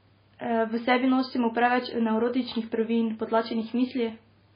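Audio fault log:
throughout: likely MP3 compression. Nothing remains above 5 kHz, and the speech turns heavily watery and swirly as weak frequency components flicker between frames, which fits a bitrate near 16 kbps. Unlike a simple low-pass filter, the swirling persists below the cutoff.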